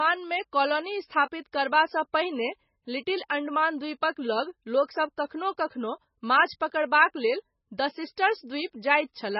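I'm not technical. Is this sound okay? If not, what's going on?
No. The speech has a dull, muffled top end from start to finish. Nothing above about 5.6 kHz survives, so s sounds lose their crispness. There is also a watery, swirling quality, with metallic chirps on hissy sounds. This is heavy MP3 compression, likely from saving the file at a very low quality setting. Short of data, the encoder cut off the treble and dropped quiet details, which flicker in and out and cause that swirl.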